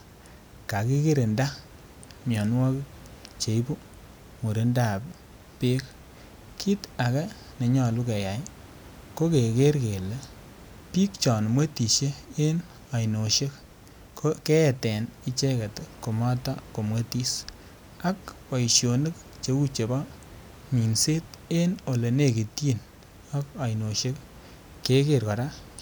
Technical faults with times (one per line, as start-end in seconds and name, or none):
none